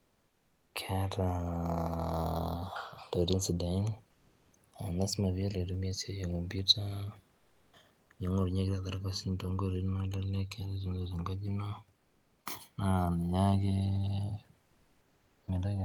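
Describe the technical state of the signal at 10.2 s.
At 10.2 s, as throughout the recording, the channels are drifting apart: the two sides run on separate clocks differing by around 70 parts per million, so their offset keeps growing toward roughly a millisecond. Summed to mono, sweeping comb notches produce slow flanging over the speech, with room noise about 38 dB below it.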